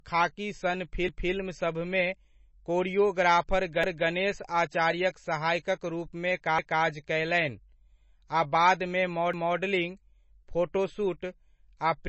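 Speech recorded through a low-bitrate encoder, likely MP3 compression, loses all content above 8 kHz. The remaining audio sounds heavily watery and swirly, with smeared consonant attacks. The damage fits a bitrate of around 26 kbps. The audio was also processed in overlapping chunks, with each 2.5 s block starting 250 ms before the previous one ended. That 250 ms plays twice as an audible stutter at 1.09–1.34 s just after "'खाकी' सन", at 3.84–4.09 s just before "आचार्यक सहायकक रूपमे", at 6.59–6.84 s just after that same phrase, and at 9.34–9.59 s.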